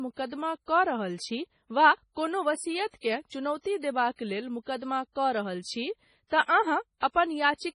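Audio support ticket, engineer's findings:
Watery, swirling texture on the speech throughout. Metallic chirps on s sounds, smeared consonant attacks. Nothing above 10.5 kHz. Likely heavy MP3 compression, fitting about 24 kbps. Encoder cuts the treble at a fixed point and drops weak bands frame to frame.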